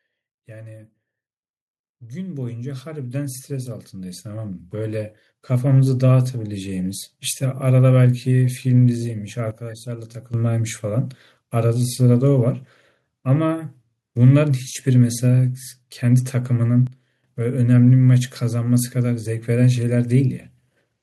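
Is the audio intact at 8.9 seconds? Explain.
Yes, the speech at 8.9 seconds is intact, with no dropout, click, distortion or other fault at that moment.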